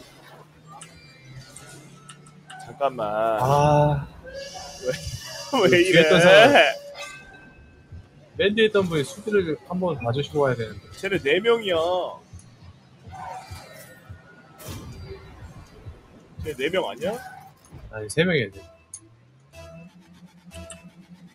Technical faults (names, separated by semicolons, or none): noise suppressor applied to music or sounds; sound cut by the noise suppressor